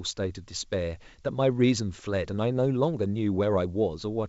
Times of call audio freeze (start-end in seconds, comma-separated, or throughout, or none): none